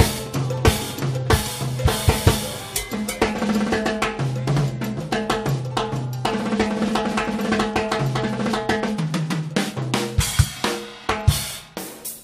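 At 10.44 to 10.46 s, damaged data in a compressed stream makes the decoder lose frame sync, leaving a brief glitch: a broken waveform segment and a vertical smear or gap on the spectrogram.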